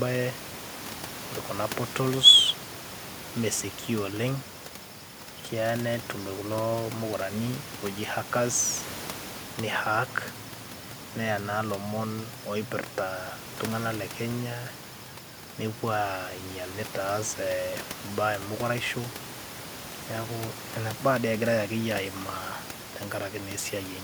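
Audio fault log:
Nothing faulty heard anywhere in this speech recording.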